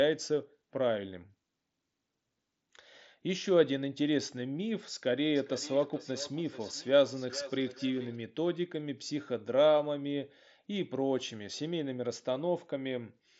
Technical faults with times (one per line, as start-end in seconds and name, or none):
5.35-8.22 feedback echo between two devices